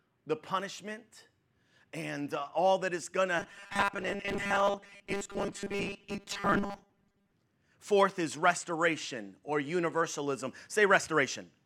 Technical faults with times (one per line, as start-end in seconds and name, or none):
3.40-7.34 robotic sound from repeated short buffers